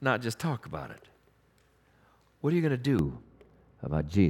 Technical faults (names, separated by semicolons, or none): de-emphasis applied wrongly